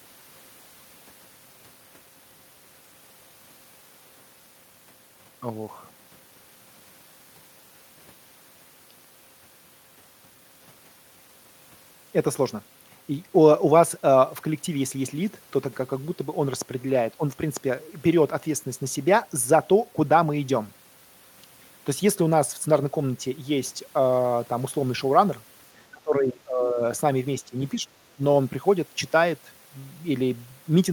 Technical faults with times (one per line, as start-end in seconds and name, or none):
25.92-26.81 speech suppressed in double talk
27.42-28.22 speech suppressed in double talk